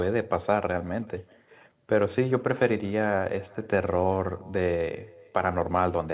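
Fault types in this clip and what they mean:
Echo with no canceller: the far end's loudspeaker leaks into its microphone unremoved, so each phrase returns around 400 ms later as a faint copy, about 25 dB down.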